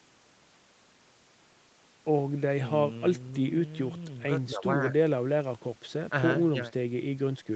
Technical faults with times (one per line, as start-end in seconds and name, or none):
none